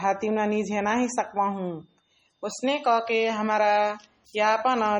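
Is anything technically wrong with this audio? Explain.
Yes. Throughout the speech the sound is watery and swirly, with metallic chirps on s sounds and smeared attacks. This is heavy MP3 compression, likely at a bitrate around 32 kbps: starved of bits, the encoder drops weak frequency lines, which flicker on and off from frame to frame.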